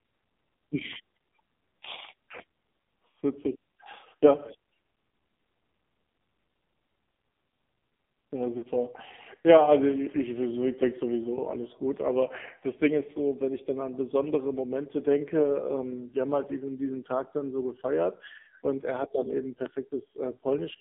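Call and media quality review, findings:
AMR narrowband mobile codec, throughout: low-rate AMR-NB mode, heavy coding damage consistent with roughly 5.9 kbps. Line band about 200 Hz to 3.6 kHz, nothing above. Speech sounds buzzy and synthetic as the vocal-tract model is driven by too few excitation pulses.

Lost AMR speech frames, 8.58 to 8.66 s: radio-side frame errors, decoder concealing with reused pitch and filter settings at falling gain. About 40 ms gap, consistent with two dropped 20 ms frames. Brief dip or warble in the speech.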